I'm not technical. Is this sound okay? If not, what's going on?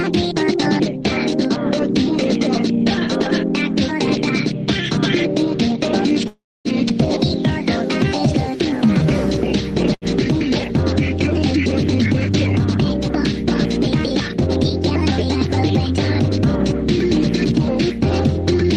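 No. A call audio freeze at 6.27–6.68 s puts a gap of about 0.4 s in the sound. The last sound fades into silence, likely because data was delayed on the way and the player ran out. Then it resumes where it stopped.

A skip ahead at 6.89–6.93 s drops roughly a tenth of a second. Playback jumps forward and joins the two sides almost directly.

A jitter buffer slow-down at 8.51–9.04 s plays the sound at about 93% speed without changing pitch. The player repeats tiny slices of sound to build up a reserve.

A short stall from a late packet at 9.94–10.05 s holds a sound for an extra 75 ms while the player waits for the missing piece, then continues.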